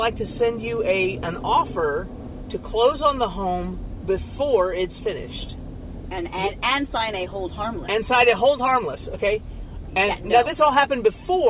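No faults are audible anywhere in this recording.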